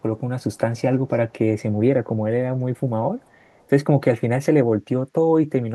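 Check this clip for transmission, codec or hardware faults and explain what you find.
One fault shows up: echo leak, in three short stretches of the speech. They fall at 0.41 to 0.58 s, 2.76 to 2.80 s and 3.20 to 3.66 s. Each time, a delayed copy of the voice trails the original by about 336 ms. The copy is very faint, far below the speech. The likely cause is a far-end echo canceller on a loudspeaker call letting some of its microphone pickup through. The sound comes back as brief scraps.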